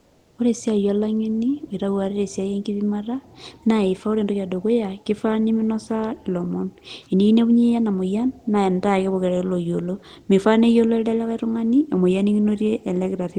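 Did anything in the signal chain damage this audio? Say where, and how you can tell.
Yes. Comfort noise in place of the background, 0 to 0.38 s: a steady, featureless hiss about 3 dB quieter, likely synthesized during the call codec's discontinuous transmission.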